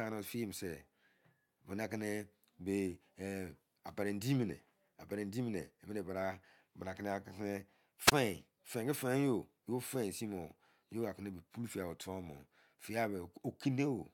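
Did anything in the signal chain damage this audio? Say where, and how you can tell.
Yes. A wireless microphone squelch dropout in the radio link, from 8.06 to 8.12 s. The fading signal tripped the receiver squelch, muting the speech for about 21 ms.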